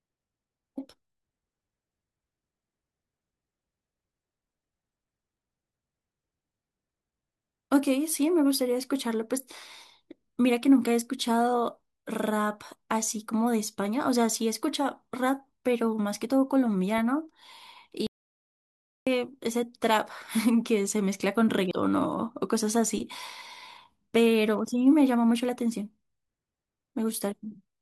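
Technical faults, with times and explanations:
16.98 s, corrupt FLAC frame: a single frame of the lossless stream carries damaged bits, and the decoder played it without rejecting it on its checksum. From the bad bit onward, the linear predictor rebuilds samples from wrong residuals and coefficients, so the waveform departs sharply from the speech for about 2 ms. The following intact frame decodes cleanly, which is why the disturbance stops abruptly.
18.07 to 19.07 s, audio dropout to silence: the speech cuts off mid-flow and returns one second later, with the gap holding silence rather than a quiet passage. No room tone or background noise survives inside it, which shows the signal itself was absent while recording continued. About 1.0 s of speech is simply missing. The likely cause is a momentary loss of the input, such as a disconnected or muted source, with the recorder writing empty samples throughout.
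21.71 s, compressed frames skipped: the speech jumps forward by about a tenth of a second, meaning one or more whole coded frames were never played, either because they were missing or because the decoder discarded them as damaged. Because lossless frames do not overlap, the edges on either side of the gap meet with a hard click, and the speech resumes slightly ahead of where it left off.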